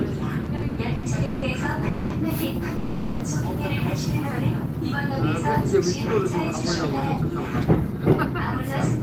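From 0.43 to 1.44 s, packets arrive late again and again, so the jitter buffer keeps emptying. The result is repeated stalls (stutter): six gaps totalling 390 ms, the longest 170 ms, filled by continuing the last sound, so the audio drags. A call audio freeze follows at 1.88 to 2.12 s and again at 2.76 to 3.22 s, likely from packets held up in transit. The last sound is extended for 220 ms and 440 ms before the audio resumes where it stopped.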